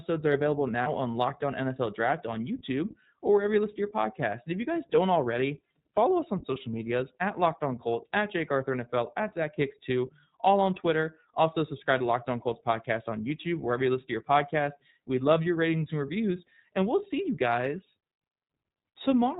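From the start the speech sounds band-limited, slightly rough and synthetic, with plainly audible coding damage and nothing above 4 kHz. This is the iLBC codec, a narrowband VoIP coder that codes each frame's excitation independently, which fits its 15.2 kbps mode with 20 ms frames.

At 0.82 to 0.88 s a brief held, faintly buzzy vowel-like sound replaces the speech for about 40 ms, then clean coding resumes immediately. These are lost iLBC frames: the decoder filled the gap, which points to two missing 20 ms frames, by repeating the last pitch cycle mixed with noise. Because each frame decodes on its own, recovery is instant.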